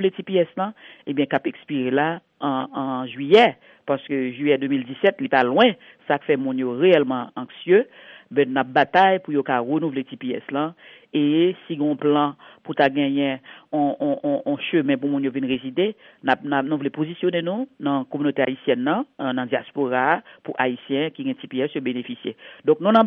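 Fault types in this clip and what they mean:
No technical faults can be heard in this clip. There is nothing to list under any heading.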